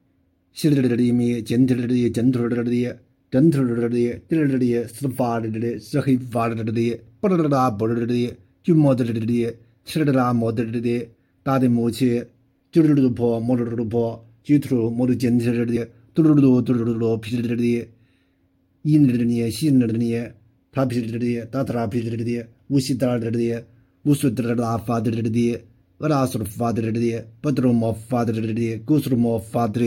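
Compressed frames skipped at 15.75 s: the audio jumps forward by roughly 70 ms, which fits about three compressed frames lost from the file or rejected by the decoder as damaged.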